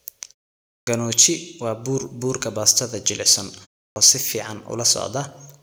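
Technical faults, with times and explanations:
0.82–0.87 s and 3.91–3.96 s, clipped start after a pause: speech bursts in abruptly, its opening sounds missing, with about 50 ms lost each time after silences of 0.56 s and 0.33 s. The output device slept during the silence and needed that long to wake before sound passed again.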